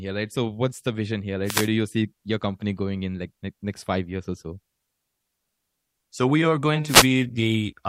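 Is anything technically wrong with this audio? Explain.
Yes. Two wireless microphone noise hits occur: from 1.44 to 1.69 s, after "what's the vision here" and before "you see your company", and from 6.85 to 7.09 s, after "we are going". Each lasts about a quarter second. The FM radio link briefly fades as reflected signals cancel, so receiver noise rises into a swish of static over the speech. Unlike a digital dropout, the sound is not cut to silence or glitched. Noise is laid over it and then clears.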